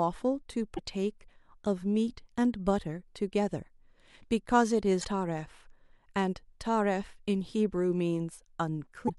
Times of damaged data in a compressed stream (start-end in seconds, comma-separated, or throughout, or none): 0.75-0.79, 5.00-5.05, 9.05-9.10